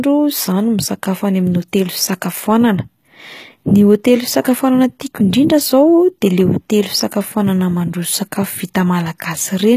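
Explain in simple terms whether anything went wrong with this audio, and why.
Throughout the speech, the s sounds and crisp top end come across gritty and metallic. The likely cause is heavy HE-AAC compression, which fakes the treble by copying lower sounds upward.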